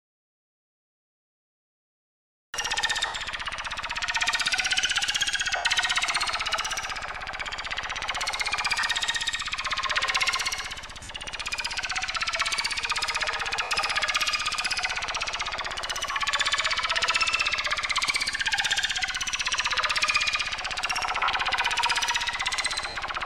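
The recording opens in an audio dropout to silence that is already under way and lasts until 2.54 s. For that stretch the waveform is a flat line and the spectrogram is fully black, with no room tone at all. The sound then begins abruptly. Silence like this most likely means the input was lost, through a disconnected device, a failed link or a mute, while the recorder kept writing.

From there, lost LE Audio frames break up the everyday sounds in short bursts at 3.06–3.14 s, 5.56–5.65 s, 8.80–8.83 s, 11.03–11.09 s, 13.57–13.71 s, 16.12–16.16 s, 21.18–21.30 s and 22.89–22.95 s. The gaps run from 30 to 90 ms, in steps that fit 10 ms frames. The events at 13.6 s and 21.2 s are scattered rather than solid, with the longest runs around 70 ms and 40 ms. In each gap the LC3 decoder repeats the last spectrum with randomised phase, so any tonal content smears into a brief noisy hiss. On the spectrogram these show as short vertical patches where harmonic lines dissolve into diffuse energy of roughly the previous spectral shape, fading slightly in the longer ones. 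The waveform loses its structure there without going flat. Light lossy coding across the clip leaves only faint traces alongside these.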